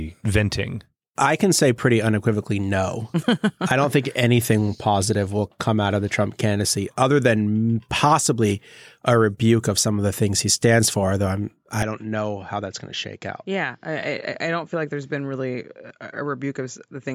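From 11.82 s to the end, the speech drops about 10 dB and loses everything above 7.6 kHz, with a faint new noise floor, likely an input switched to a poorer device.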